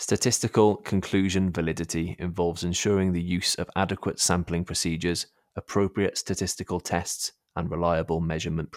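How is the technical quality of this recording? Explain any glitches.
The recording has one brief glitch, a burst of DAB burbling. It runs from about 6.16 to 6.19 s, right after "procedures appropriate". Under weak reception, a few bit errors slipped past the error correction into the MP2 audio data. The fault spans only a few frames, which fits an error rate of about 0.07 percent. Corrupted samples put short blips of noise in single sub-bands. You hear a short burst of noise blips laid over the speech.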